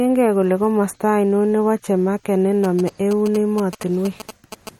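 It's a short speech clip with two problems. All the way through there's plainly audible watery, swirly smearing, and nothing comes through above 17.3 kHz. That points to MP3 compression at a low bitrate, something like 48 kbps, as the likely cause: the encoder ran short of bits, cut the treble at a fixed point, and let weak frequency lines flicker on and off between frames, so attacks come out blurred. Then, from 2.64 s to 4.69 s, right after "nebo chemarket", you get GSM signalling bursts, that galloping dit-dit-dit of short buzzes repeating at about 217 Hz, sitting roughly 15 dB under the speech. A 2G phone close by was sending its short signalling bursts, and the audio circuitry rectified the radio energy into the recording.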